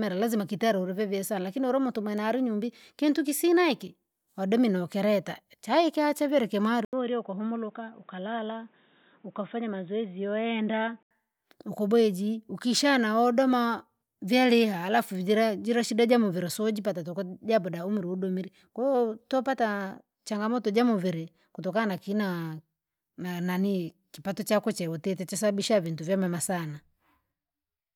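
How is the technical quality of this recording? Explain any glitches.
One glitch: from 6.85 to 11.11 s, after "chaika chavile kimwari", the speech turns dull and boxy, likely an input switched to a poorer device. An 80 ms gap marks the switch, nothing is present above 3.8 kHz, the level drops a little, and added background noise sits roughly 35 dB below the speech until the sound clears before "ukubweji ukishana wodoma vyaliha".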